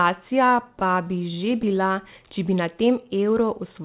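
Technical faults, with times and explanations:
0.8–1.8 s, repeated stalls (stutter): Just before "če bi na", the speech catches on itself over and over. Packets kept arriving late, so the receiver's jitter buffer ran dry many times in a row. Each time it stretched the last bit of sound to bridge the wait, adding about 130 ms in all, with no single hold longer than about 12 ms. Nothing is lost, so unlike a dropout it sounds jerky rather than chopped.
2.75–3.47 s, jitter buffer slow-down: Right after "če bi na", the speech runs at about 92% speed, lengthened by about 62 ms, while the pitch stays where it was. The buffer was rebuilding its reserve, so it repeated single pitch periods and slivers of pause, which draws the sounds out smoothly. Unlike the earlier stutter, there are no separate catches, only an even drag, heard within a band that stops at 4 kHz.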